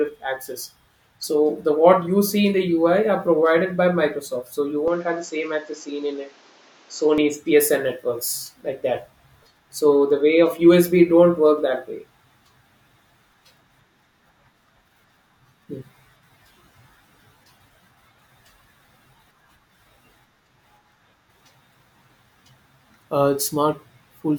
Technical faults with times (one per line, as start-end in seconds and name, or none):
4.88-7.18 input switched to a poorer device